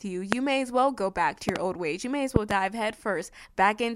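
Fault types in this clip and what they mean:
Loud pop: sharp, intrusive clicks sit on top of the speech, which carries on underneath: a single pop at 0.33 s just before "may as well go", a double pop from 1.49 to 1.58 s between "well go back to" and "old ways", and another double from 2.36 to 2.53 s right after "may as". Each peaks well above the speech, about 20 to 25 dB. The likely cause is a sudden voltage pulse from a switch, connector, static or driver glitch entering the signal path.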